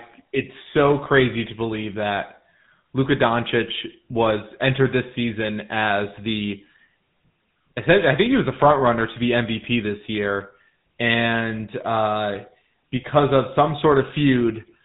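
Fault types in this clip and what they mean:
GSM full-rate codec: The whole recording has passed through the original GSM speech coder, whose roughness fits its 13 kbps rate. It models the vocal tract with a filter and drives it with a sparse, regularly spaced pulse excitation, discarding much of the detail between pulses. The damage is plainly audible throughout as a buzzy, gravelly texture on the speech, and the band stops at about 3.9 kHz, leaving it dull and telephone-like.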